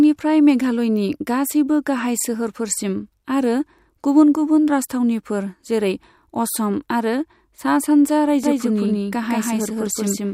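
From 8.44 s to the end, the speech carries a doubled audio track: a second full-band copy trails the first by roughly a fifth of a second, at about the same level, with no decay or room colouring, so each syllable sounds twice. It likely comes from the signal being captured again through a slower path. On a waveform or spectrogram, every onset repeats as an identical shifted pattern, and the copy begins abruptly at 8.44 s.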